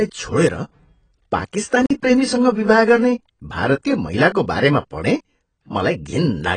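From the start and throughout, the speech is dull and smeared, with nothing above 9.3 kHz and a fizzy, warbling texture on sibilants. This is likely heavy AAC compression at a low bitrate. Unlike a simple low-pass filter, the band below the cut-off also sounds patchy and swirly.

From 1.86 to 1.90 s, a block of digital silence cuts the audio for about 46 ms, which fits a 2,048-sample buffer that was not filled in time. The sound stops and restarts with no fade. A dropout from packet loss would usually be smoothed over, but this gap is plain silence.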